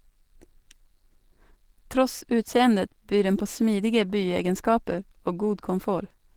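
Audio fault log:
throughout: Opus compression. The speech sounds hoarse, rough and grainy, with a muffled, noisy texture even though content still reaches about 20.3 kHz. The likely cause is Opus running in its hybrid speech mode, which fits a low bitrate around 16 kbps.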